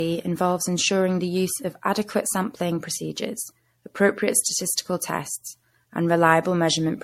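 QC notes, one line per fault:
Throughout, generation loss: swirly, hollow speech with blurred attacks and nothing above 16.6 kHz, likely from about seven MP3 passes stacking noise, consistent with 64 kbit/s.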